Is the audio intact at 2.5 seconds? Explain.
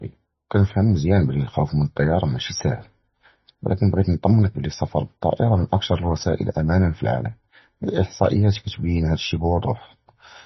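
No. At 2.5 seconds, as across the whole clip, the speech shows heavy damage most likely from MP3 compression at a very low bitrate, around 25 kbps. Starved of bits, the encoder cuts everything above 5.9 kHz and discards weaker frequency lines, which then flicker on and off between frames. The result is dull, band-limited speech with a watery, swirling texture, metallic chirping on s sounds, and smeared consonant attacks.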